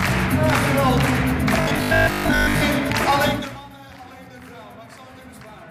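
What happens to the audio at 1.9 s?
At 1.9 s the sound turns into a rigid, metallic 50 Hz buzz, robotic sound from repeated short buffers, lasting from 1.61 to 2.63 s. The likely cause is a roughly 20 ms buffer being replayed while most of the real audio is skipped. Unlike a dropout, the sound never goes silent.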